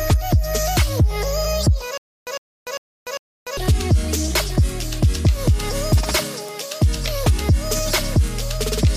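From 1.98 to 3.57 s there is a stutter with silent gaps: a 105 ms fragment repeats four times, each followed by 294 ms of digital silence, every 399 ms. The likely cause is a stalled stream replaying its last buffer. On a waveform, identical blocks alternate with flat lines, and the missing audio never returns.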